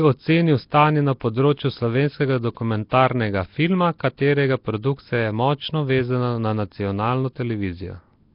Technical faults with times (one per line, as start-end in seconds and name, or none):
0.00-8.35 Nellymoser compression
2.89-2.91 pre-echo